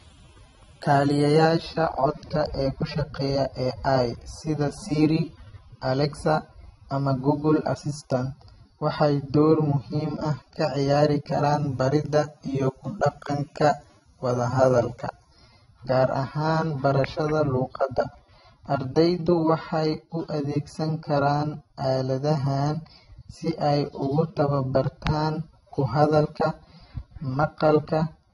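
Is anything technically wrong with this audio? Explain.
Yes. Throughout the speech there is transcoding between lossy codecs, likely a low-bitrate AAC-LC encode near 24 kbit/s re-encoded as MP3 near 64 kbit/s. The MP3 stage spends bits on the AAC artefacts and adds its own, so both kinds of artefacts are heard together, and nothing remains above 11 kHz.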